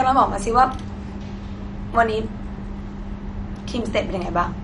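Speech, carrying MP2 compression damage from start to finish. The sound is dull and plainly degraded, with a gurgling, granular roughness. A spectrogram shows nothing above 11.3 kHz, with sub-bands below that edge flickering on and off as blocky patches. This is the likely result of an MPEG Layer II encoder starving its 32 sub-bands of bits, which fits a low bitrate around 48 kbps. It switches off upper bands and coarsely quantises the rest.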